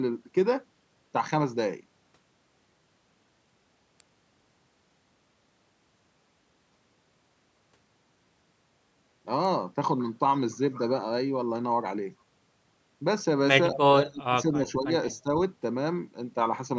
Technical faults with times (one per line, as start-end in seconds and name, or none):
4.00 electrical switching spike
13.72-13.77 speech suppressed in double talk
13.74-13.78 echo leak
14.02-15.28 speech suppressed in double talk